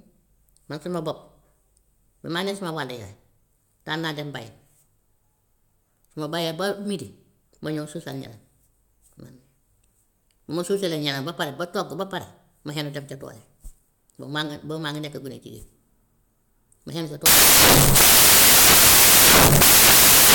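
A speech clip whose final stretch collapses into loud, harsh broadband noise. From 17.26 s to 20.35 s the samples are built from the wrong bytes. The reader misassembles each sample, so the fast-changing low bits dominate. Noise replaces the speech.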